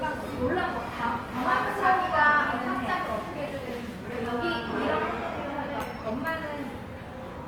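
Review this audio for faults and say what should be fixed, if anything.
Throughout, there's Opus compression: tones sound grainy and rough rather than swirly, because starved bands get filled with folded or noise content. Bandwidth still reaches 20.2 kHz, and the plainly audible damage fits a bitrate around 24 kbps as the likely cause. Next time, encode from the original at a higher Opus bitrate, or keep a lossless master.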